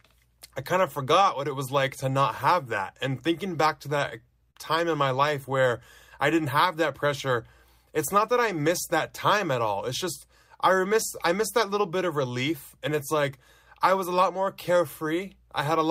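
At 4.51 to 4.57 s there is a short stall from a late packet: the jitter buffer ran dry, so the receiver stretched the last sound for about 44 ms until the packet arrived. The speech holds briefly with a faint buzz or dip before "time in my life", nothing lost.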